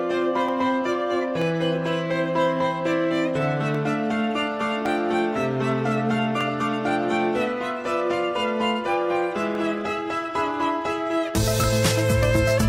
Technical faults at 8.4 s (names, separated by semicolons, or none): none